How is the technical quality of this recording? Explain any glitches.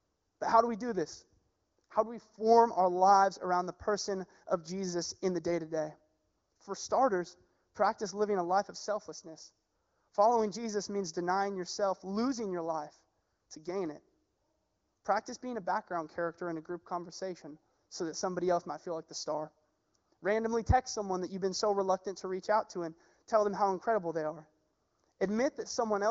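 The speech has one fault, channel delay (comb filtering), present for the whole clip. One channel lags the other by roughly a fifth of a millisecond, and when the two are summed to mono, energy common to both cancels at evenly spaced frequencies. The first notch sits around 3 kHz, giving the voice a hollow, phasey character in the presence range. The notch never moves, which separates this from a flanger's sweep. The top end stops near 7 kHz, consistent with the wideband voice codec at a clean rate and separate from the notch.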